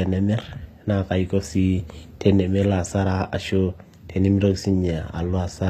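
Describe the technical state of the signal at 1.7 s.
At 1.7 s the speech carries plainly audible HE-AAC compression damage, present throughout, likely from band replication rebuilding the treble from copied lower bands at a low rate near 24 kbps. S sounds turn gritty and lispy; a spectrogram shows repeated, blocky upper bands stopping sharply at 14.9 kHz.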